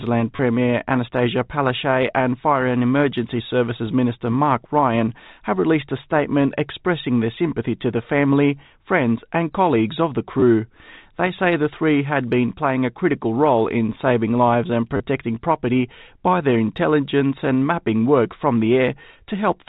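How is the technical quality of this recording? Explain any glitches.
The speech is carried through G.711 telephone coding, so it stops at 4 kHz. Three short glitches interrupt it, at 0.36 to 0.39 s, 10.40 to 10.42 s, and 14.97 to 15.00 s.

These are packet loss with the last packet repeated. For 30 ms, 20 ms and 30 ms, the receiver replayed stale audio, which points to roughly 10 ms packets. Each replay is a brief robotic stutter, fluttering at about 100 Hz. A plain dropout would be a silent gap instead.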